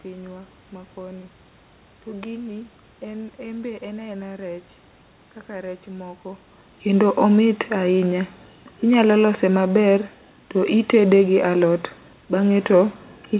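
Nothing in this speech recording points to a technical fault. The band stops at 4 kHz, which fits a G.711 mu-law call path, a faint room noise sits about 40 dB below the voice, and the level shifts around 6 s as the talker moves relative to the microphone.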